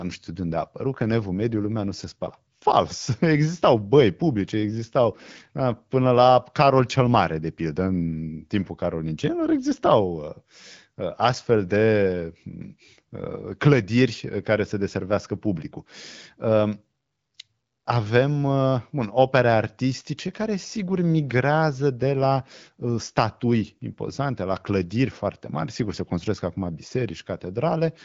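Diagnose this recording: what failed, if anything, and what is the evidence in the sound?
Nothing failed at any stage; the speech carries only the light coding footprint expected of the AMR wideband (HD Voice) codec running at 12.65 kbit/s.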